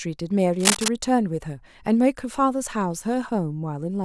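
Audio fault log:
0.59 to 0.92 s, cable scratch noise: a third of a second of dense, ragged crackle sits right on top of the speech, about as loud as it, most likely a worn cable or connector being moved so its contact resistance flickered and spat noise into the signal.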